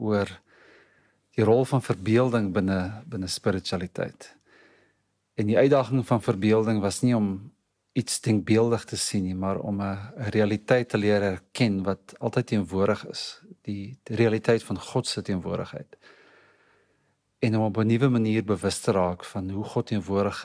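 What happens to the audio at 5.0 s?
Nothing goes wrong at 5.0 s; the audio plays through that moment intact, with no dropout, click or distortion.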